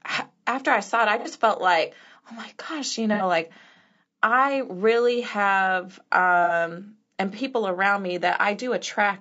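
Low-delay AAC compression runs through the whole speech clip. The sound is rough and grainy, with noise between the pitch harmonics and a thin, synthetic-sounding top band. The likely cause is AAC-ELD, whose short frames resolve harmonics poorly, and the damage fits a bitrate near 32 kbps.

AAC frame loss with concealment occurs three times. The first is from 1.19 to 1.28 s, between "I saw it I" and "felt like oh my". The second is from 3.14 to 3.23 s, after "oh my gosh you", and the third is from 6.44 to 6.53 s, after "I really have". Each time, missing data is filled in from the last good spectrum. This leaves a short smeared, noisy patch, which fits two lost frames, about 60 ms.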